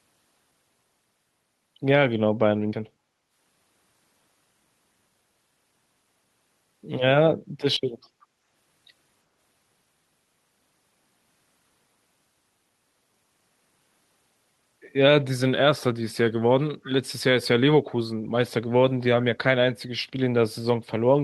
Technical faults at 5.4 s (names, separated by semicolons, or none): dropped buffer (overrun)